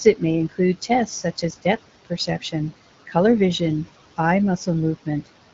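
Noise suppressor artifacts run through the whole clip. The suppressor pulls what it judges to be steady noise down by about 17 dB, so the room noise, which sits about 16 dB under the speech, sinks in pauses and swells beneath syllables. A spectrogram shows the background floor blinking on and off with the speech, and the waveform's gaps look unnaturally clean.

Speech cut by the noise suppressor follows between 1.06 and 1.66 s, where roughly a sixth of a second of quiet speech energy is mistaken for noise and dropped by up to about 15 dB. Between 2.05 and 2.54 s, about a tenth of a second is pushed down by up to about 18 dB. Both stretches sound swallowed and faint. On a spectrogram they appear as dark notches chewed out of the speech harmonics, and on the waveform as sudden dips in the envelope.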